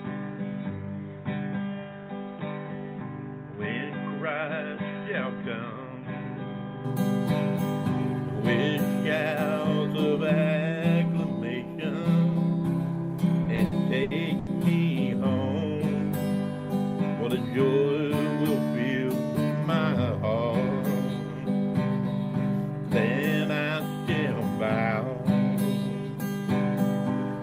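From the start to 6.85 s, the input was likely switched to a poorer device, with the capture running through a narrower, noisier path until the better input returns. The band is narrower, so the sound is dull and boxy. It sits about 5 dB lower, over a faint added background noise well below the signal. At 6.85 s the full band and level come back at once, with no silence at the changeover.

From 13.43 to 14.49 s there are repeated stalls (stutter). Audio arrived late or too slowly, so the playback buffer ran dry five times, and each time the receiver stretched the last sound to bridge the wait. The longest hold is 80 ms, and together the holds fill about 250 ms, roughly a quarter of that second. Nothing is lost, but the sound drags and hiccups.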